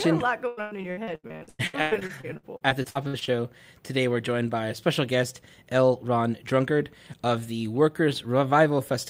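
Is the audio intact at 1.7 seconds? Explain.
No. 1.7 s falls within repeated packet loss from 0.47 to 3.32 s, where missing stretches are patched by extending prior sound, giving choppy, robotic speech.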